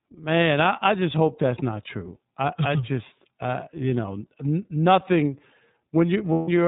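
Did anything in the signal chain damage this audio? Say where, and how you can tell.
Yes. At the codec stage, the whole clip shows plainly audible iLBC codec damage. The sound is rough and synthetic because each 30 ms frame's excitation is coded on its own, which fits a 13.33 kbps mode. On a spectrogram, all energy stops at a hard 4 kHz ceiling.

At the network stage, lost iLBC frames leave a gap from 6.33 to 6.49 s, about 150 ms, which fits five 30 ms frames. The decoder repeats the last pitch cycle mixed with noise, so it sounds like a held, buzzy vowel. The waveform shows one cycle repeating and fading, and the spectrogram shows flat, smeared harmonics.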